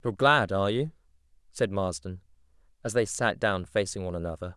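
No technical faults are audible.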